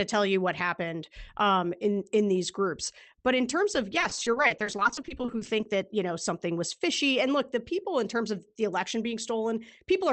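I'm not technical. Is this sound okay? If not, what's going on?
No. From about 3.99 to 5.66 s, between "in terms of" and "that you know something", the call connection kept dropping small pieces of the audio, each up to about 30 ms. This is repeated packet loss (robotic sound). The system patched each hole by stretching the last bit of sound, and about a third of that stretch is patch, so the speech turns choppy and robotic.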